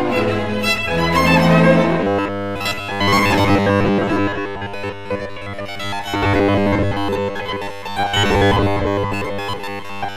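From 2.03 s to the end at 10.16 s, new audio likely arrives too seldom, so a short stretch of about 10 ms is repeated over and over while most of the real sound is skipped. This robotic sound from repeated short buffers imposes a rigid, metallic 100 Hz buzz.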